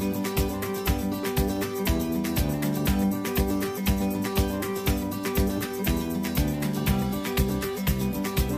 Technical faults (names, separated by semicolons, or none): none